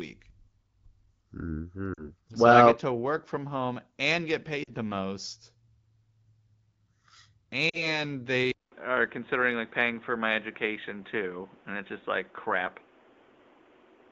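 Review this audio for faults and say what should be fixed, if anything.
Lost AMR speech frames occur three times: 1.93 to 2.12 s, 4.64 to 4.71 s (between "from home and get" and "the most"), and 7.70 to 8.03 s. Each gap is about 40 ms, which fits two consecutive 20 ms frames failing their checks. The wideband decoder covers each gap by repeating the last good pitch and spectral shape at falling gain, so the sound smears briefly, dips, and returns weak or rough for a moment. On a spectrogram, harmonics stretch flat and fade. The waveform shows a short tapering envelope. Prevent this with stronger error protection on the radio link or better coverage.

An input switched to a poorer device at 8.52 s and stays until the end. A silence of about 200 ms marks the switch. After it, the sound turns dull and boxy, with nothing above 3.8 kHz, a level shift of a few decibels, and a new noise floor roughly 35 dB under the signal. 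This is likely caused by the system changing to a different microphone or a headset call profile. A spectrogram shows a hard ceiling at 3.8 kHz and a raised background band, and the waveform has a visible gap and an amplitude step. Prevent this by locking the input device for the whole recording.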